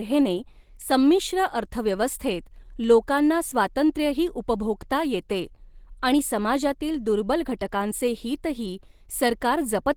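From start to end, the speech carries plainly audible Opus compression damage, likely from a low-bitrate encode. Voiced sounds turn rough, grainy and hoarse, with a muffled core, which fits the encoder's hybrid speech mode at around 16 kbps. The band still reaches about 20.2 kHz, but the top is filled with noisy texture rather than detail. Unlike MP3 damage, there are few spectral holes, so it swirls less.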